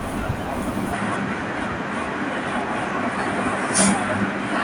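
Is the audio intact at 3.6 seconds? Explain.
No, 3.6 seconds falls inside a stretch from 0.93 s to the end where the input was likely switched to a poorer device. Everything above 10.5 kHz is gone, so the speech sounds duller, with a faint new noise floor but no gap or level jump at the switch.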